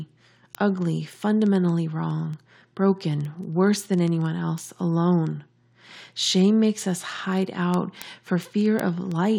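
From 0.14 to 9.34 s, word clock ticks sound about twenty times a second. An unlocked receiving clock slips one sample each time.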